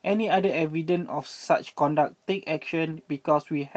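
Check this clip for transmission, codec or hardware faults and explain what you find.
One transmission fault is present in this speech clip.

A lost packet rebuilt from error correction occurs at 2.91 to 2.93 s. One 20 ms packet went missing, and the decoder played a low-bitrate copy carried in the next packet, so there is no gap, just a brief rougher, noisier patch. The call path's Opus coding caps the audio at 8 kHz.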